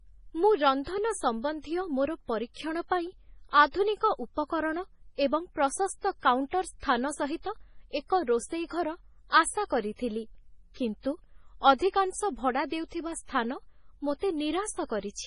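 Throughout the speech, the treble stops dead at 10.5 kHz and weak detail flickers, giving a watery, swirly texture with metallic chirps on s sounds. The likely cause is heavy MP3 compression at a bitrate around 24 kbps. On a spectrogram this shows as a flat ceiling and blotchy, patchy high bands.

At 6.80 s, a sharp attack is preceded by about 34 ms of hiss. This is pre-echo: the codec's noise for that block spreads back into the quiet moment before the onset. On a waveform, a low smear rises just ahead of the transient.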